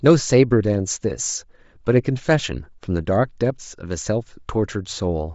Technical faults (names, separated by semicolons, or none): Bluetooth LC3 compression